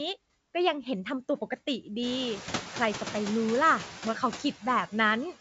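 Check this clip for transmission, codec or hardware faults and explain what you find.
One fault runs through the whole clip: noise suppressor artifacts. The suppressor cuts bands it judges to be steady noise by about 9 dB, frame by frame. The room noise, which rises around 2 s, dips between words and swells under them.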